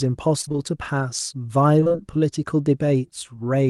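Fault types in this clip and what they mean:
Repeated packet loss (robotic sound): Short holes follow one another in quick succession, each patched by stretching the preceding sound, so the speech turns choppy for a moment. It happens at 0.41–0.57 s and again at 1.81–1.98 s, with each burst pointing to about four lost packets. The longest holes run about 19 and 24 ms, and nearly half of each stretch is filled-in sound. Unlike a single dropout, it is a rapid run of small gaps heard through the Opus call path.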